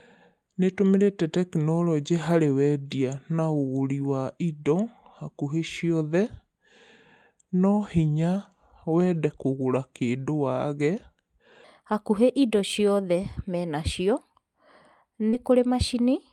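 From the start to 11.64 s, the speech runs at the wrong speed. It plays at 0.8 times its recorded rate. Pitch falls with it, by roughly four semitones. The voice sounds deep, heavy and slow, and every syllable is drawn out. The likely cause is a section played against the wrong clock. Normal speed and pitch return just before "hakuhĩ indo".

From 15.29 to 15.35 s there is a short concealed packet loss. About 40 ms of audio did not reach the decoder in time. The receiver covered roughly 32 ms of the gap by extending the preceding sound, then blended back into the real signal. The result is a brief smear or wobble in the speech. A quick consonant in that spot may be lost.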